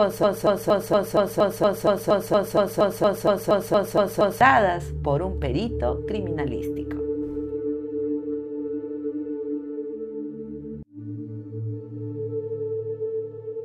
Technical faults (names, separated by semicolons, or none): broken-record loop